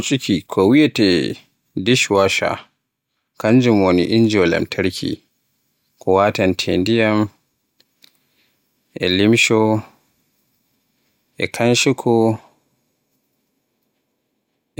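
Speech recording with no audible technical faults anywhere in it.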